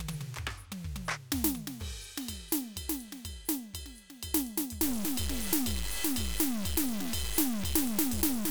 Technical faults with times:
4.83-8.50 stuck bit

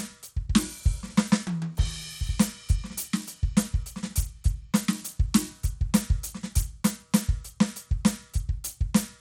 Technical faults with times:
0.00-9.20 Bluetooth SBC compression

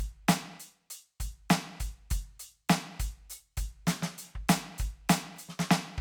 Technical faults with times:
none

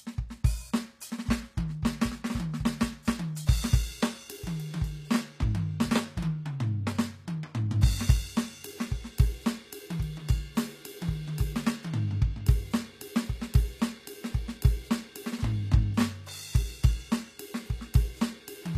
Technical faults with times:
0.00-18.77 HE-AAC compression

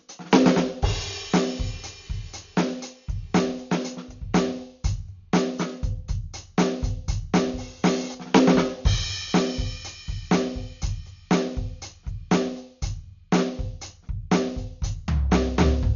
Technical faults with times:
0.00-15.96 Dolby Digital compression

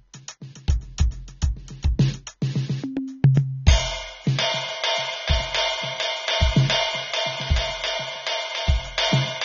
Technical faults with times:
0.00-9.45 AAC compression

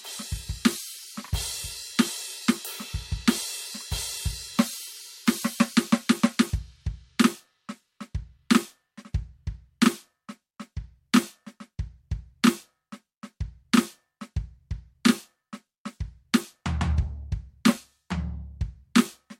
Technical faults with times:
none

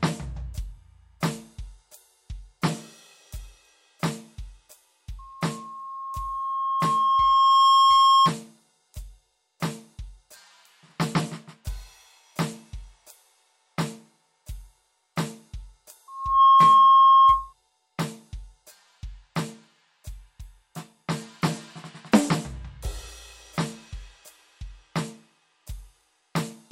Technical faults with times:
5.18-8.33 loudspeaker feedback squeal
16.08-17.53 loudspeaker feedback squeal

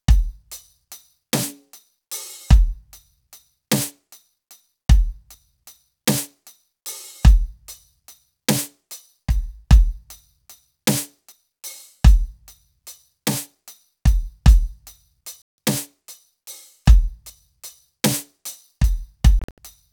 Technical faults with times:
15.42-15.58 Bluetooth dropout
19.39-19.58 Bluetooth dropout

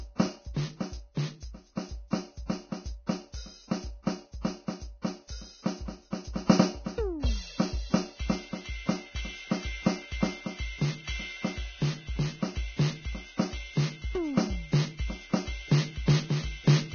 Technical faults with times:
0.00-16.94 Vorbis compression
4.41-4.45 pre-echo

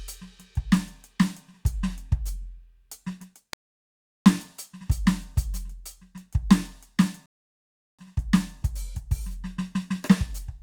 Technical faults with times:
3.53-4.26 rebuffering stall
7.26-7.99 rebuffering stall

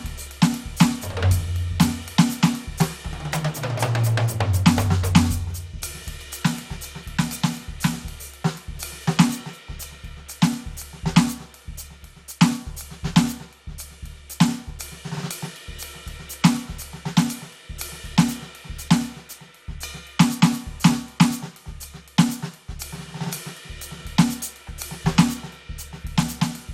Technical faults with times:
0.00-26.74 generation loss

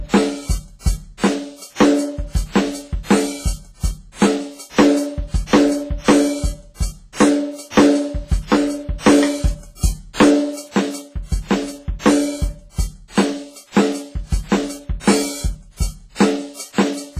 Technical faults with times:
0.00-17.20 hard clipping
0.00-17.20 WMA compression

